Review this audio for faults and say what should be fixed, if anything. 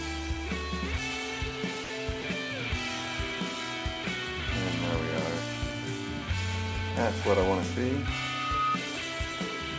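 Twice near the start the sound briefly gives way to steady, flat noise before returning: from 1.84 to 1.90 s (60 ms) and from 2.22 to 2.24 s (20 ms). This is likely sound dropped by the voice detector. The sender's detector judged quiet material to be background and stopped transmitting, so the receiver filled the gaps with generated comfort noise. To prevent it, lower the detector's threshold or lengthen its hangover time, or disable discontinuous transmission.

From 7.97 to 8.78 s a single tone near 1.2 kHz swells over roughly 0.7 s, ending about 5 dB above the rest of the sound. This is loudspeaker feedback squeal. A microphone picked up the loudspeaker it was feeding, and at 1.2 kHz the loop gain went above one, so that frequency kept growing on its own. The G.722 call path carries nothing above 8 kHz, but this tone sits well inside its band. To prevent it, reduce monitor gain, increase the distance between microphone and loudspeaker, or use headphones or echo cancellation.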